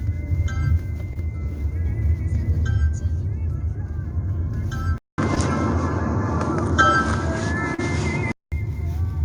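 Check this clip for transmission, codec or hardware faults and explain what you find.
Two kinds of fault are present: three short concealed packet losses and one stretch where the input switched to a poorer device.

Short concealed packet loss occurs at 1.13 to 1.17 s, 5.35 to 5.38 s and 7.74 to 7.80 s. Audio failed to arrive in time, so the receiver extended the preceding sound and crossfaded back. Each gap is heard as a brief smear or wobble; the last is about 60 ms long.

From 4.98 to 8.52 s, the sound dulls abruptly after a short silence of about 200 ms and then clears again. This is likely an input switched to a poorer device: content above 9.8 kHz disappears, a faint new noise floor appears, and the level stays roughly unchanged.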